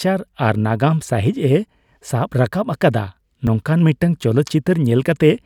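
At 3.47 s the speech jumps forward, with no gap of silence. This is most likely a dropped buffer (overrun): the capture side did not read its samples in time, so the hardware overwrote a few milliseconds of audio and the two surviving edges were joined directly. On the waveform there is a sudden step where the signal does not continue smoothly, and on the spectrogram a thin vertical broadband line marks the splice.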